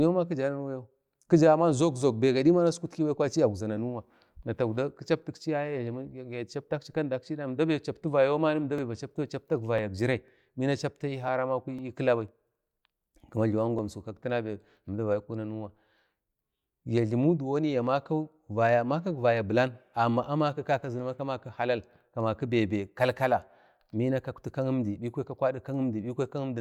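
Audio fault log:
8.78–13.79 s, periodic USB or driver dropouts: regular ticks every 0.5 s, as a background task stalls the audio path and about a millisecond is skipped each time.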